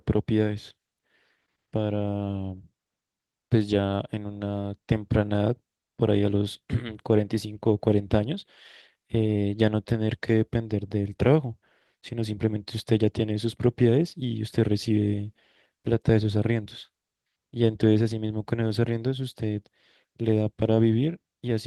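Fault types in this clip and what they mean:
Nothing in this speech clip stands out as a fault, so there's nothing to list here.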